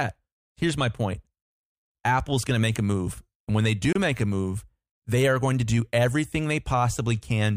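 A speech clip with one Bluetooth stall: between "when they" and "make a move they", the audio drops to silence from 3.93 to 3.95 s, about 28 ms, then resumes. This is likely interference delaying wireless packets until the headphone buffer briefly ran empty.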